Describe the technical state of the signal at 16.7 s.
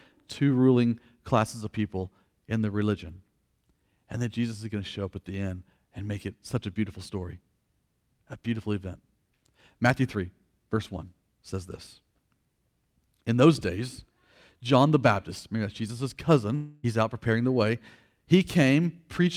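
At 16.7 s you're inside a gap from 16.55 to 16.85 s, likely a long network dropout: nothing arrived, so the receiver stretched the last sound into a fading buzzy hiss for nearly the whole gap. Speech resumes with "out preparing the way", the missing part gone.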